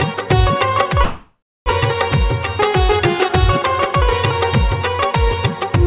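From 1.04 to 1.69 s a call audio freeze, likely from delayed packets draining the jitter buffer, stretches the last sound into a fading buzz, then about 0.3 s of silence, before the audio resumes exactly where it stopped. On a spectrogram, already blank above 4 kHz as a G.711-style telephone codec would leave it, this appears as smeared, decaying texture and then an empty column; the waveform shows a shrinking envelope flattening to near zero.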